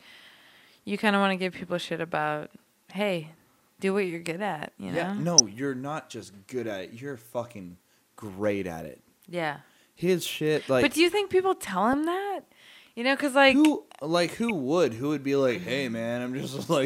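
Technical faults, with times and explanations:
5.38–5.40 s, 11.93 s and 14.35–14.50 s, DAB burbling: bit errors in weak reception slip past error correction, corrupting audio samples in a few frames, producing brief noise blips in single sub-bands over the speech.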